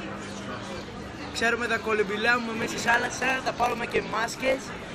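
From 2.60 s to the end at 4.95 s, a block size mismatch (truncated) sets in. Each block, which fits 1024-sample writes, loses its tail before the next stage reads it, giving a 50 Hz buzz and sound running 1.16 times fast at near-normal pitch.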